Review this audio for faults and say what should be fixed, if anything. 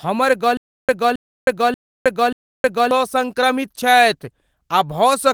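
From 0.57 to 2.91 s the speech stutters with silent gaps: a 269 ms fragment repeats four times, each followed by 316 ms of digital silence, a 585 ms cycle, and the speech due in that span is lost. The likely cause is a stalled stream replaying its last fragment on each retry. Deeper buffering, and pausing cleanly on underrun instead of replaying stale audio, would prevent it.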